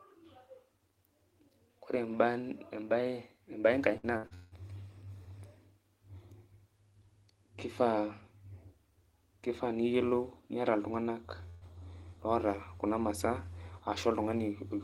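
From about 3.97 to 4.53 s there's repeated packet loss, and it gives the speech that robotic, choppy quality. Four gaps land in just over half a second, the longest around 167 ms. Each one gets bridged by stretching the last bit of sound, so roughly 320 ms of real audio is replaced and more than half the stretch is patched rather than genuine. You hear choppy sound with chunks of the speech missing.

Later, at 11.49 to 11.63 s, there's a burst of packet loss. About 120 ms of audio failed to arrive in time. The receiver covered the hole by carrying the previous sound forward and letting it fade, so there's no silent gap. Instead you get a short held buzz or hiss, and then the speech picks up a little further on with that slice gone.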